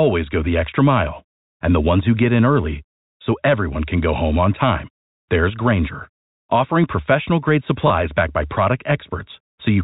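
At 7.88 to 7.90 s there is a short burst of packet loss with the last packet repeated. For about 20 ms, the receiver had nothing new to play and filled the gap by replaying the previous stretch of audio. That single replay comes across as a small blip in the speech. The duration points to a single lost 20 ms packet. The G.711 telephone coding keeps the audio band-limited below 4 kHz.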